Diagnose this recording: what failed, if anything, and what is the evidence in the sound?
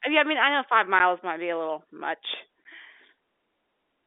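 Network stage: packet loss filled with silence. At 0.99 s (before "might be a little") and 2.64 s (after "be a little much"), 10 ms flat waveform gaps, blank spectrogram columns, hard edges.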